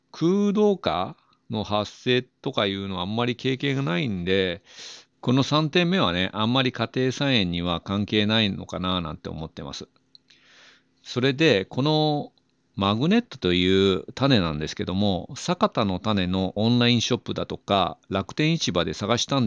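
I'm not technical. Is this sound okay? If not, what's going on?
Yes, nothing wrong can be heard in this recording.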